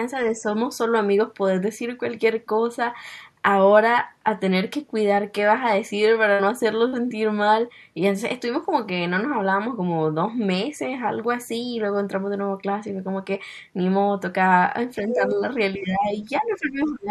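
Speech suppressed in double talk appears three times. From 0.2 to 0.48 s, the echo canceller likely could not separate the talker from loudspeaker echo while both sides spoke. It pulled the level down, a shallow dip of around 5 dB across part of that span. The same happens from 15.02 to 15.4 s with a similar small drop. From 15.78 s to the end, the suppression is much heavier, roughly 15 dB deep over about a second, so the speech sounds ducked and broken up.

The other side's voice leaking through comes from echo that was likely not fully cancelled, so part of the loudspeaker signal stays in the microphone feed. From 15.25 to 15.35 s, during the second dip, a brief second voice sits only about 10 dB below the talker. From 16.51 to 16.55 s, a much fainter scrap of about 40 ms, roughly 35 dB down, slips through.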